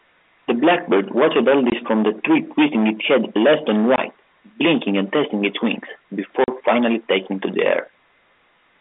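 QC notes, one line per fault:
throughout: hard clipping. The speech is driven about 15 dB past what the chain can pass, so roughly a tenth of the samples are cut flat. Those squared-off peaks add high harmonics, heard as a harsh fuzz on every loud syllable within the narrow telephone band.
1.70–1.72 s, 3.96–3.98 s, 6.44–6.48 s: packet loss filled with silence. The first two gaps last 20 ms and the third 40 ms, which fits one and then two lost 20 ms packets replaced by silence. Each hole has abrupt, hard edges.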